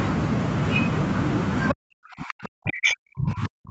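A speech recording from a call, where nothing above 8 kHz is heard, consistent with a wideband Opus path at around 32 kbps. At 1.69 to 1.74 s a brief scrap of a second voice, roughly 10 dB below the talker, breaks through. This is the other side's voice leaking through, most likely loudspeaker playback that the echo canceller failed to fully remove from the microphone. What marks it as echo leakage, not crosstalk or background chatter, is its timing and character: a short fragment, not a steady separate voice in the room. From 1.74 s to the end, the talker's own speech sinks, dropping by as much as about 40 dB at its deepest. That is speech suppressed in double talk. With both sides likely talking at once, the canceller probably could not separate the near voice from the echo and attenuated everything. It differs from a simple dropout or packet loss because it begins exactly where the leaked voice ends and persists for the rest of the clip.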